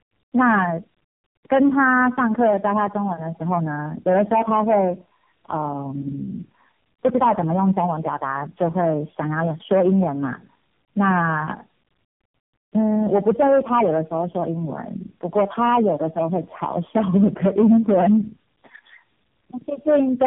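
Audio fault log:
Throughout: tandem speech coding. The speech passed through three speech codecs in a row, apparently iLBC then AMR-NB twice, being decoded and re-encoded at each link, so every coder compounds the last one's damage. It sounds rough, muffled and warbly, with nothing above 3.5 kHz.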